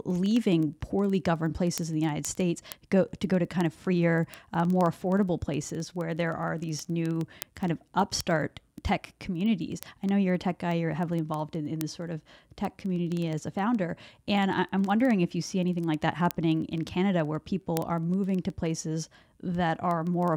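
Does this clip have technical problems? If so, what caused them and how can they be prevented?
Yes. Word clock ticks sound at about twenty per second from 0.10 s to 20.33 s. The unlocked receiver clock drifts roughly 400 ppm, slipping one sample each time. Lock the receiver to the sender's clock.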